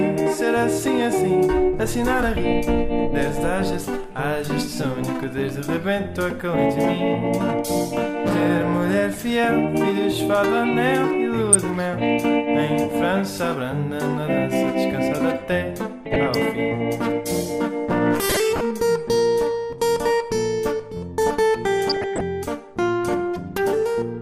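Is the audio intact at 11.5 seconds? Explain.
No. From 11.53 to 11.55 s there is a brief burst of short noise blips in single frequency bands. This is DAB burbling: bit errors, at a rate of a small fraction of a percent, slipped past the receiver's error correction into the MP2 data. Corrupted samples put short blips of noise into individual sub-bands, which points to a few damaged frames.

Under that burst, and across the whole clip, the sound is dull, with a gurgling, grainy texture and flickering upper bands. This is plainly audible MP2 compression, likely from too few bits per frame, which fits a rate around 80 kbps. With so little data, Layer II switches off whole upper sub-bands and quantises the remaining ones coarsely.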